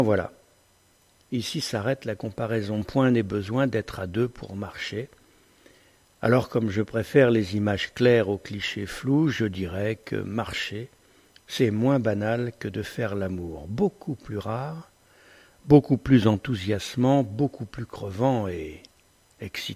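No faults detected anywhere in the clip.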